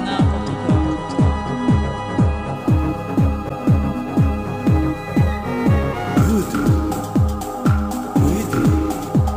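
From 2.56 s to the end, a bright metallic fizz rides on the sound, following its level at about 28 dB below it. This is imaging from sample-and-hold upsampling: samples were repeated without smoothing, mirroring the spectrum into 11.03–22.05 kHz, which points to a 22 kHz source raised to 48 kHz.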